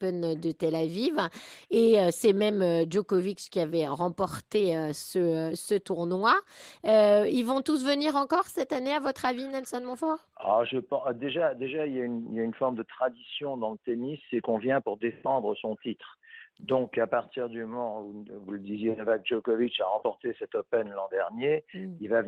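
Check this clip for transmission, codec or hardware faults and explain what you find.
Two related timing faults run through the whole clip.

Clock drift between sender and receiver is present from start to end. The sender's clock runs about 3% slower than the receiver's. The receiver's buffer keeps running low. The result is a steady, faint unevenness in timing rather than any single obvious glitch.

Repeated timing corrections follow from that, from 0.04 s to 22.13 s. To stay in step, the receiver keeps repeating short pieces, always in the same direction and at uneven spacing. Together they stretch the audio by roughly half a second, so it plays at 97% speed. Each repeat is small, heard, if at all, as a slight hiccup or a wavering tempo.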